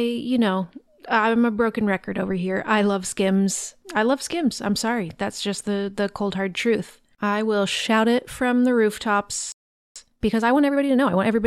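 At 9.52 s the speech cuts to silence for about 0.44 s, a playback stall, likely the player starving for data or its output thread being blocked, before resuming at 9.96 s. From 9.96 s to 11.38 s comes time-compressed catch-up: the player trims and cross-fades small segments to clear its backlog, so the speech runs about 1.25 times faster at unchanged pitch.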